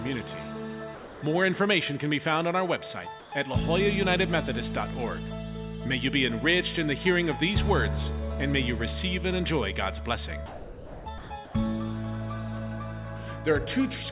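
From 0.95 to 1.22 s the sound cuts out and steady hiss fills the gap, with about 230 ms of sound lost. This is sound dropped by the voice detector, likely because it mistook that passage for background and stopped sending while the receiver generated comfort noise.

At 3.2 to 3.32 s the background, sitting about 24 dB below the loudest parts, turns flat and featureless and drops by about 1 dB. This is comfort noise in place of the background, likely synthetic noise filling a transmission pause.

The dropouts return from 10.46 to 11.06 s, losing 600 ms, and from 11.18 to 11.3 s, losing 120 ms. Both are again sound dropped by the voice detector, with steady noise standing in until the detector triggers again.

From 11.45 to 11.54 s the background again becomes smooth comfort noise at an unchanged level. Throughout the clip nothing is heard above 4 kHz, consistent with a narrowband telephone codec.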